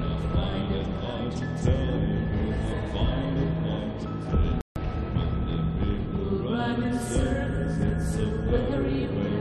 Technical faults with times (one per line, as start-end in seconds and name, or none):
4.61-4.76 rebuffering stall